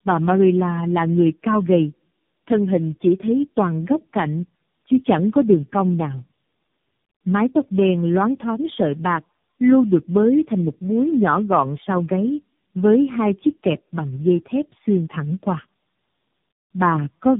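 For the whole speech clip there is tandem speech coding: the sound points to four speech codecs in a row, AMR-NB among them, each re-coding the previous one's errors. It is rough, muffled and warbly. A spectrogram shows nothing above 3.7 kHz, with smeared, wavering harmonics.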